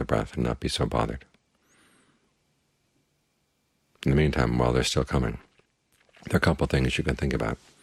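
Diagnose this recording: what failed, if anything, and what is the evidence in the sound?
Nothing in the audio points to a failure at any stage of the chain, from capture through to playback.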